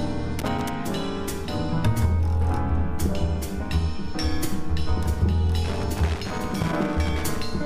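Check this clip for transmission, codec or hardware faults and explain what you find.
Loose connector crackle appears twice, from 0.39 to 0.74 s and again from 5.64 to 7.44 s. A worn or dirty contact is making and breaking as it shifts, chopping the signal and popping wherever DC sits on the line. It sounds like an irregular, scratchy burst. These crackles are uneven in spacing.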